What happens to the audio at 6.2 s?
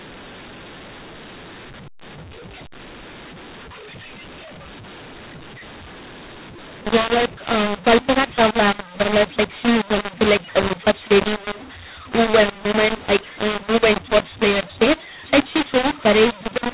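At 6.2 s the speech is harsh and distorted, as it is throughout the clip. This is a mu-law and A-law mix-up. The A-law telephone samples are decoded as mu-law, so levels come out scrambled. Quiet samples are lifted, and pauses fill with noise.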